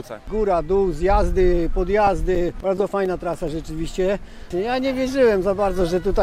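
From 1.79 to 3.62 s, CD scratch ticks appear. Fourteen brief clicks, each a few milliseconds, repeat about eight times a second. Damaged disc data beyond error correction gets patched or muted on each rotation.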